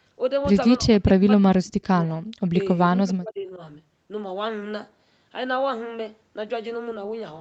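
From 0.8 to 2.09 s, and again from 3.03 to 3.6 s, the speech drops out in pieces by about 40 dB, then about 35 dB. The likely cause is speech suppressed in double talk. The waveform envelope collapses in patches, and the spectrogram shows blank gaps.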